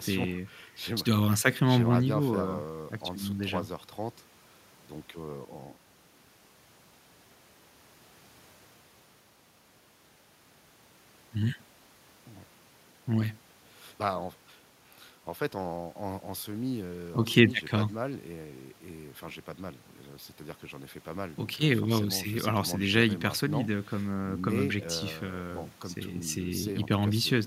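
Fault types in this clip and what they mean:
Nothing to flag here: the speech comes through without any audible technical faults.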